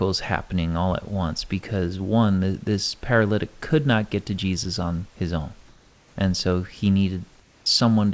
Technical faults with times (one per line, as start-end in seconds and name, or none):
7.40-7.66 comfort noise in place of the background
7.64 onset clipped by the voice detector